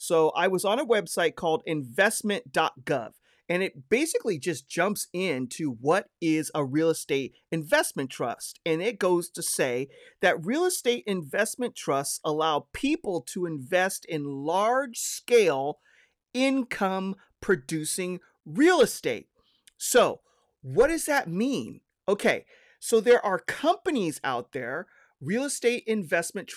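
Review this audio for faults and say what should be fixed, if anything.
Nothing to fix; no faults are audible anywhere in the speech.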